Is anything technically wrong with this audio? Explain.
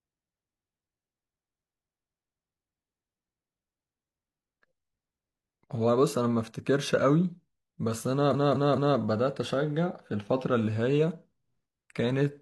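Yes. Repeated frames occur at 1.39–2.41 s and 8.30–8.94 s. Compressed blocks of 256 ms and 213.3 ms replay four and three extra times. Each run stutters.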